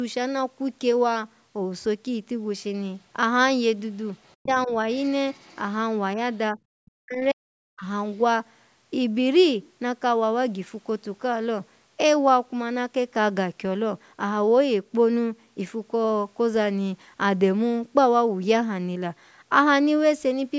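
From 4.24 to 4.46 s, faint scraps of the other side's voice leak through, about 25 dB below the speech, likely loudspeaker echo that the echo canceller left in the microphone signal. Overlapping this, from 4.38 to 4.74 s, the speech is suppressed in double talk: the talker's voice drops sharply, by roughly 40 dB at its deepest, likely because the canceller turned down both voices while both sides were talking. Further leakage follows at 4.93 to 5.10 s and 5.31 to 5.59 s, at about 35 and 30 dB below the speech. Suppression returns as a slight dip at 6.52 to 6.58 s, a deep cut of around 40 dB from 6.79 to 7.53 s, and another heavy dip at 7.75 to 7.86 s.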